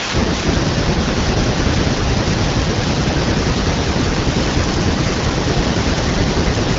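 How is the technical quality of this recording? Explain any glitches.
The speech carries the light coding character of AMR wideband (HD Voice) at 12.65 kbit/s, and no glitches or other faults can be heard anywhere in the recording.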